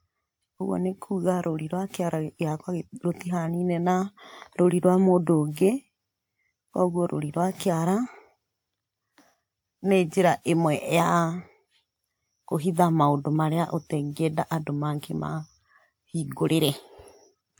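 All the way through this speech clip there's a swirly, hollow smear on everything, and consonant onsets come out blurred rather than crisp, even though the top end reaches up to about 20.1 kHz. That mismatch points to generation loss: the audio was likely decoded and re-encoded with a lossy codec, something like WMA 1 at 128 kbit/s, about five times over. Each pass requantised it on a shifted frame grid, so the noise and spectral holes kept piling up.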